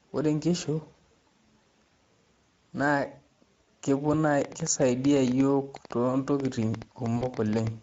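Speech runs throughout with plainly audible Speex codec damage, consistent with a Speex mode near 16.8 kbps. The CELP coder has too few bits for the excitation, so the sound comes out hoarse and grainy, and any content above 4 kHz is a shaped noise fill rather than real detail. VoIP packet loss concealed by the speech codec appears at 1.89–1.94 s and 3.65–3.69 s, where about 20 ms went missing each time, and at 7.17–7.25 s, where the gap of about 40 ms suggests two lost frames. At each spot the decoder extends its last pitch and filter with falling gain, giving a brief, fading smear. The sound stays weak or distorted for a short while after the stream resumes. From 4.42 to 7.68 s a train of clicks ticks over both the sound and the pauses. There are roughly 30 similar pulses at about 8 per second with irregular spacing, peaking around 10 dB above the signal, likely from electrical interference or a faulty connection or power supply.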